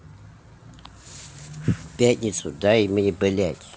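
The clip is speech that came through a call path and has nothing technically wrong with it; the sound stops at 8 kHz, as that path's codec does.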